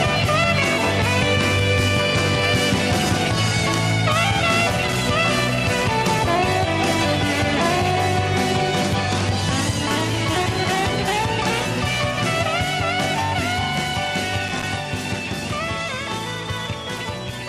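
The audio has two bursts of loose connector crackle, from 4.69 to 4.95 s and from 14.48 to 14.78 s. A worn or dirty contact rapidly makes and breaks, chopping the signal into irregular scratching. A spectrogram would show ragged broadband vertical streaks, and the waveform jagged interruptions.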